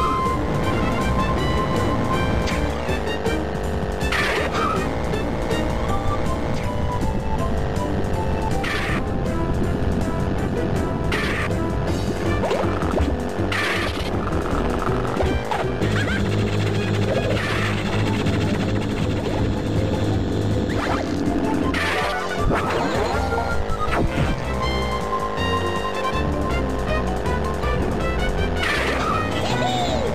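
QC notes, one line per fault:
Nothing to flag here; I listened all the way along and didn't hear anything wrong with the audio.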